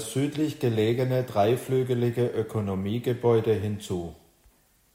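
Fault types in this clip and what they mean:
No technical faults can be heard in this speech recording. There is nothing to list for it.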